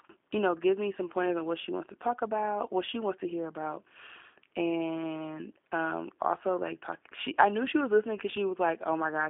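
G.729 codec coding runs through the whole speech clip, with nothing above 3.6 kHz and a line band of about 250 Hz to 3.5 kHz. The voice is rebuilt from a vocal tract filter, pitch predictor and sparse pulses, giving plainly audible rough, synthetic texture that fits an 8 kbit/s G.729A link.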